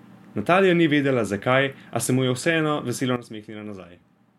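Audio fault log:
3.16–4.39 s, sudden gain jump: the digital gain likely dropped by about 12 dB between one sample and the next with no ramp, so the speech and its background noise fall in level together at once and stay quieter until the clip ends.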